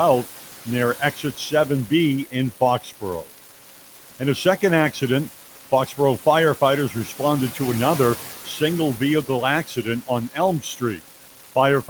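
Right from the start there's a steady crackle, a fine fizz that keeps going straight through the pauses. That's an unreliable data bit: one line in the digital path is marginal, so its bit comes out wrong in a random share of samples, and every one of those errors lands as a spike of identical size. Because it doesn't care whether anything is being said, you hear it sitting on top of everything, gaps included.

Also running the whole way through are noise suppressor artifacts. The suppressor is pulling down the bands it judges to be steady noise, by about 12 dB, and deciding that frame by frame. The room noise, about 15 dB under the speech, drops away between phrases and then comes back up underneath them.

Then there's speech cut by the noise suppressor, where it mistook parts of the speech for noise and turned them down with the background. This happens from 0.24 to 1.52 s, from 2.25 to 4.21 s, from 5.31 to 6.58 s, from 6.9 to 7.2 s, from 8.25 to 8.61 s, and from 9.64 s to the end. 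The drops reach about 10 to 12 dB. Within each stretch only parts are hit, from a tenth of a second up to roughly 0.7 s in the 2.25 to 4.21 s stretch, and those parts come out faint and swallowed.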